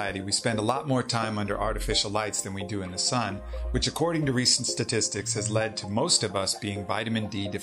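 No technical faults can be heard anywhere in this audio. Nothing in it calls for a time or a cause to be given.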